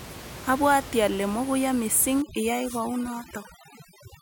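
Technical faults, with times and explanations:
2.22 to 4.21 s, overdone noise removal: the background drops and breaks up into twinkling specks, as an over-strong noise reducer shuts off quiet frequency bands.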